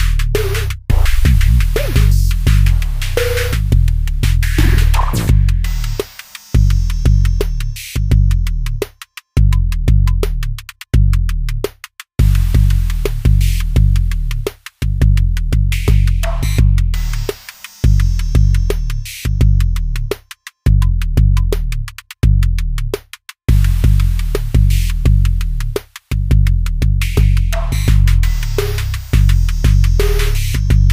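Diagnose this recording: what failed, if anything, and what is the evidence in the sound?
Nothing in the signal points to a failure at any stage of capture, conversion, transmission or playback: the audio holds together continuously, with no dropouts, discontinuities or distortion anywhere to indicate a fault.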